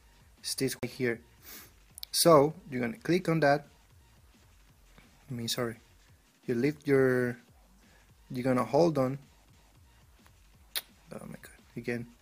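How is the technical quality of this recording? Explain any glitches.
The recording is marred by two CD skips, at 0.79 to 0.83 s and at 9.52 s. Each time, the laser lost its track and landed on another turn of the disc's spiral, so the player briefly muted and resumed from a different point. The first mute lasts about 40 ms and the second only a few milliseconds. Each is heard as a tick followed by an abrupt jump in the sound. On a waveform, each appears as a short flat gap with a hard discontinuity, and on a spectrogram as a thin vertical break.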